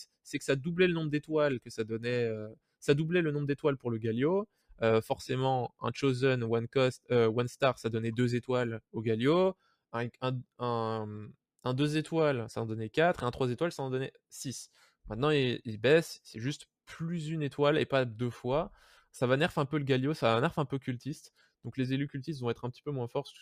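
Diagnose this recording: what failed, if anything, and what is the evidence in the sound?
The failure is in call processing: sound cut by the noise suppressor. The level sinks by about 17 dB at 2.46–2.83 s and 4.46–4.75 s, and by about 18 dB at 9.54–9.75 s. The suppressor misread that sound as noise and turned it down.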